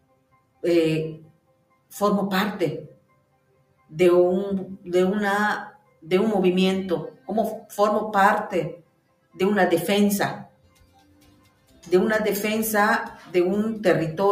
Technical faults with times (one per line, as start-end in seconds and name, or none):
0.00-14.32 noise suppressor applied to music or sounds
0.00-0.63 sound cut by the noise suppressor
1.20-1.92 sound cut by the noise suppressor
2.88-3.94 sound cut by the noise suppressor
5.70-6.08 sound cut by the noise suppressor
7.11-7.29 sound cut by the noise suppressor
8.76-9.39 sound cut by the noise suppressor
10.44-11.90 sound cut by the noise suppressor
13.14-13.34 sound cut by the noise suppressor